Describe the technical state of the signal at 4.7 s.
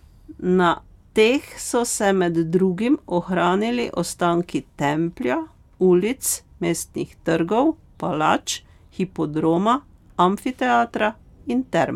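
At 4.7 s the speech signal is intact, with no audible dropout, clipping, distortion or other fault at that point.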